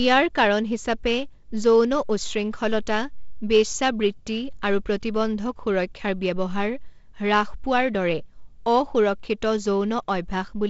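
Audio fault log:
No faults are present; the speech carries the sound of G.722 wideband telephone coding, with nothing above about 7.7 kHz and only light coding noise, which fits its lowest 48 kbit/s mode.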